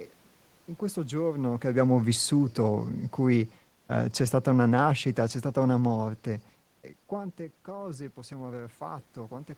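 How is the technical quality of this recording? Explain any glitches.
The recording has one technical fault, an automatic gain fall. Room noise and the talker's own movements near the microphone are part of the recording, not system faults.

From 1.33 to 6.10 s, just after "in questo", automatic gain falling: the gain control judged the input too loud or its background noise too strong and eased it down by about 6 dB. Speech and background sink together, so the waveform envelope tapers steadily.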